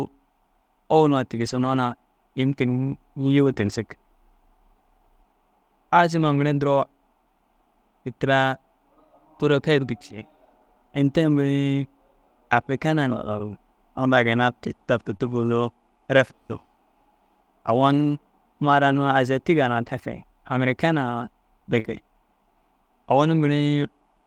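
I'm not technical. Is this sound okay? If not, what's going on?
No. At several points the connection dropped small pieces of the speech on their way through, and the receiving end had to patch them.

The most frequent problem is a lost packet rebuilt from error correction. Each lost piece was remade from a rough backup copy carried in the next piece, so nothing goes silent, but the speech turns briefly coarser and noisier at 1.35 to 1.78 s, 3.46 to 3.52 s, 3.58 to 3.76 s, 6.22 s, 15.13 to 15.15 s, 15.21 to 15.27 s, 19.85 to 19.87 s and 21.84 to 21.90 s.

Twice there is a short concealed packet loss, from 3.54 to 3.58 s and from 15.17 to 15.21 s. A tiny slice never arrived in time, so the receiver stretched the previous sound to cover it. This heard as a quick smear or wobble.

Near the end, from 21.79 to 21.86 s, there is a burst of packet loss. Several pieces in a row went missing, so the receiver held the last sound and let it fade. 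A short stretch of speech drops out before normal audio resumes.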